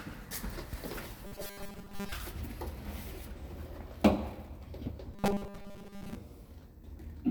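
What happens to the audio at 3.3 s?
Nothing goes wrong at 3.3 s; the sound carries on intact through that moment, with no dropout, click or other fault.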